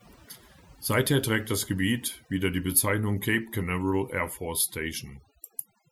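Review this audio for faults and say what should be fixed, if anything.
Overdone noise removal runs through the whole speech clip. The noise reduction was set far too hard. It cuts individual frequency bands deeply whenever they come close to its noise estimate. Softer parts of the voice sit near that level, so they vanish too. Between phrases the background drops and breaks up into twinkling specks. To prevent it, use a gentler reduction setting and check the result by ear before export.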